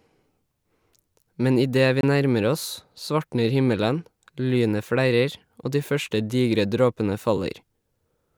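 At 2.01 to 2.04 s, a Bluetooth dropout, likely a single packet arriving too late, abruptly silences the speech for 23 ms before it resumes further along.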